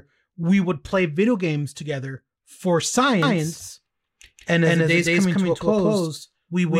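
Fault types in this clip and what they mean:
doubled audio track: From 3.2 s to the end, the speech is heard twice, a second equally loud copy trailing about 200 ms behind, likely from a duplicated capture path.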